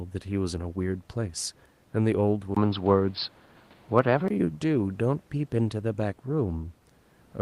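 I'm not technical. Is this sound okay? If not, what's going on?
No. From 2.55 to 4.30 seconds the speech turns dull and boxy, with a brief gap at the change, a shift in loudness, and a different background hiss. The likely cause is an input switched to a poorer device that can't carry sounds above about 5.2 kHz.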